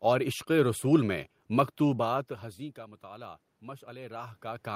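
From 2.08 s to the end, the automatic gain rising kicks in: the input fell about 21 dB around when the talker moved, so speech and room noise swell up together.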